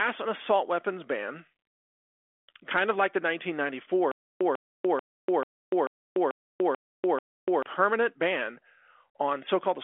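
A stutter with silent gaps runs from 4.11 to 7.63 s. The same 146 ms fragment returns eight times, each followed by about 293 ms of dead silence, a 439 ms cycle. A stalling stream likely replayed its last chunk at each retry, losing the audio in between.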